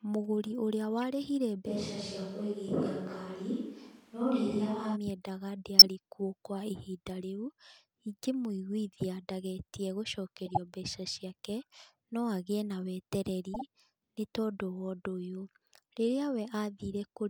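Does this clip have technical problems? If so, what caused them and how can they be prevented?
Yes. Short chirps and noise bursts at 1.02 s, 5.79 to 5.86 s, 10.46 to 10.58 s and 13.54 to 13.62 s are corrupt frames decoded: damaged compressed frames played anyway, scattering energy at wrong frequencies. The burst near 5.8 s is loud and the one at 1.02 s faint. Prevent this with error checking that conceals or drops damaged frames instead of decoding them.

From 1.69 to 4.94 s the speech turns roomy and hollow with thinner bass and faint room noise, though the level barely changes. This was likely a switch to a distant microphone. Prevent it by monitoring the close microphone's connection and keeping a backup close microphone recording.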